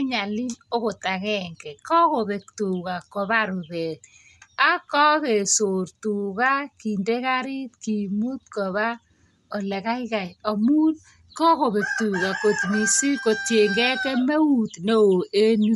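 From start to finish the speech has a breathy, grainy edge, with nothing above about 11.5 kHz. That's likely Bluetooth LC3 compression at a modest rate, around 48 kbps with 10 ms frames, zeroing the upper spectrum and filling it with noise.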